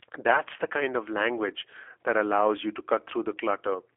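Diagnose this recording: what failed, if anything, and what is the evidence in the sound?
Throughout, the speech sounds rough, thin and faintly synthetic, with nothing above 3.6 kHz. The fault lies at the codec stage: a G.729 codec rebuilds each 10 ms frame from a vocal tract model and sparse pulses, which fits an 8 kbit/s VoIP path.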